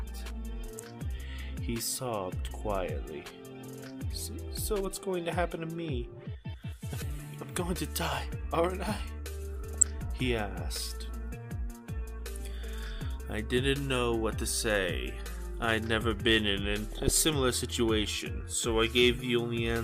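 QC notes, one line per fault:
9.70–9.88 s, DAB burbling: short noise blips over the sound. Weak reception let bit errors through into the MP2 data. Corrupted samples put blips of noise into single sub-bands, fitting about nine frames.
16.92–17.30 s, DAB burbling: a longer bout of the same noise blips, fitting about 17 hit frames. Errors stay near a third of a percent.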